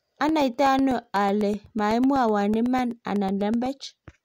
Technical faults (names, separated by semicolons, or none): periodic USB or driver dropouts